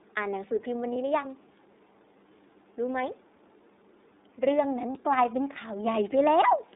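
Speech sent through the iLBC codec, a narrowband VoIP coder, so the band runs only from about 300 Hz to 3.7 kHz and everything above is gone. The codec damage is plainly audible: a rough, slightly synthetic edge on the voice, which fits iLBC's 30 ms frame mode at around 13.33 kbps. What sets it apart from other narrowband coders such as GSM or AMR is that each frame's excitation is coded on its own, so the roughness stays even rather than smearing from one frame into the next. Two lost iLBC frames break in, at 0.92 to 0.96 s and at 4.92 to 4.97 s, each a single frame of about 30 ms. In both, the decoder fills the hole by repeating the last pitch cycle mixed with noise, which sounds like a brief held, buzzy-breathy vowel rather than silence or a click. Unlike concealment in codecs that carry state across frames, the voice snaps back to normal on the very next frame instead of staying smeared for a while afterwards.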